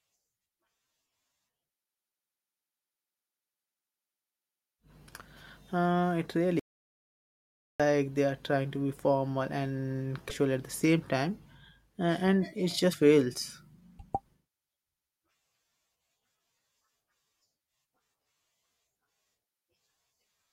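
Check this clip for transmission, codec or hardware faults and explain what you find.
Three faults turn up: one dropout and two bursts of stream corruption.

From 6.59 to 7.80 s there is an audio dropout to silence, likely from the input briefly disconnecting while the recorder kept writing zeros. The speech cuts off into about 1.2 s of silence with no room tone, then resumes at "they are trying to".

Damaged data in the compressed stream appears at 10.26 to 10.31 s, just after "to be formal and", and again at 12.89 to 12.95 s. Corrupted frames throw the decoder out of sync, so each spot is heard as a short glitch of about 60 ms.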